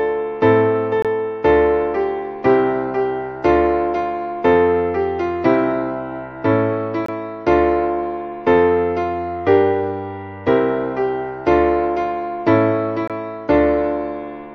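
Segment time stamps leave a gap at each 6-second stream segment boundary, and the player fills it with silence. This gap between stream segments cuts a hard-edged hole of about 23 ms into the sound at 1.02–1.05 s, 7.06–7.09 s and 13.08–13.10 s. Nothing is lost.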